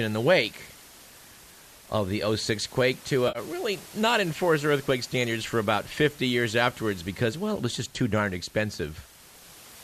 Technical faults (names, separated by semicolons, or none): AAC frame loss with concealment